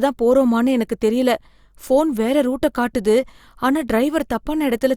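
No faults are audible anywhere in the recording; level, timing and continuity hold steady throughout.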